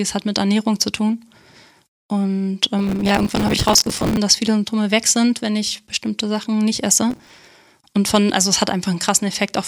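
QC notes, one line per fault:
2.79–4.17 s, processor overload crackle: gritty tearing over the speech as missed buffers, apparently around 5 ms each, get filled with stale audio, so hard-edged splices pile up.
7.10–7.47 s, processor overload crackle: same thing, a shorter burst with fewer repeats.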